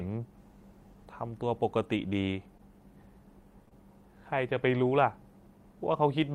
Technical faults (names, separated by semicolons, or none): short concealed packet loss